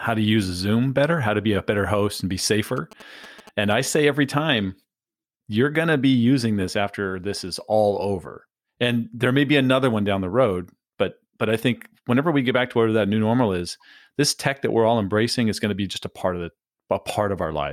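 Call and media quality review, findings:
GSM signalling bursts, 2.77–3.96 s, after "better host and be": galloping 217 Hz ticks, roughly 20 dB down. Likely source: a nearby 2G phone's RF rectified.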